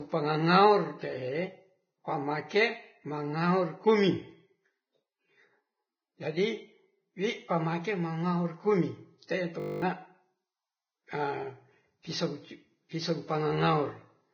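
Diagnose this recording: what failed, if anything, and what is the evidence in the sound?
The whole speech track is dull and grainy, with nothing above 6.5 kHz and hissy, roughened treble. That's likely a heavily squeezed Vorbis compression stage, fitting something near 16 kbps.

From 9.6 to 9.82 s there's a system hang loop at the driver or buffer stage. A 20 ms slice repeats eleven times, buzzing at 50 Hz, and about a fifth of a second of real audio is gone.

Pre-echo from the same codec shows up at 12.03 to 12.05 s and 12.89 to 12.91 s. A hiss of about 21 to 23 ms leaks ahead of the attacks and softens them.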